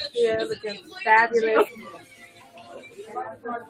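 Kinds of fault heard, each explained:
noise suppressor applied to music or sounds: A noise suppressor built for speech is active across the whole clip. It treats the steady, sustained and ambient parts of the sound as noise and pulls them down, while sharper onsets get through. The gain it takes away swings by roughly 15 dB, so the level pumps and thins. On a waveform the envelope jumps at onsets and sags after them. On a spectrogram, tails and sustained energy fade in uneven, blotchy patches.
sound cut by the noise suppressor: From 1.97 to 2.98 s, about one second, the suppressor treated the passage as noise and turned it down harder than the surrounding audio. The reduction reaches about 9 dB at its deepest. The sound sinks and loses presence rather than cutting out entirely. A waveform shows a visibly narrower envelope across that span. A spectrogram shows that stretch as a darker, dimmed region compared with the sections on either side.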